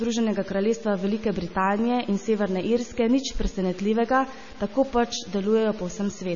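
A speech recording, about 6 seconds long, carries two faults throughout. Quiet passages and decaying sounds turn gritty and grainy, with an error floor about 25 dB below the signal that moves with the sound rather than sitting as steady hiss. The likely cause is low bit depth without dither, with the samples truncated to a coarse grid consistent with about 6 bits. There is also heavy coding damage with a watery, swirling texture, smeared onsets and no content above 7 kHz. This is likely MP3 compression at a low bitrate in the region of 24 kbps, where weak spectral lines drop in and out between frames and the treble is cut off.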